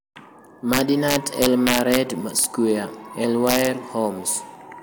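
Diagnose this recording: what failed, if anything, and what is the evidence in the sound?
Integer overflow at 0.73 to 1.97 s, 2.39 to 2.44 s and 3.47 to 3.67 s, in the fixed-point gain or sample-format conversion stage. Speech peaks pushed about 4, 1 and 2 dB past full scale wrap to the opposite sign instead of limiting, producing harsh cracks sharper than clipping.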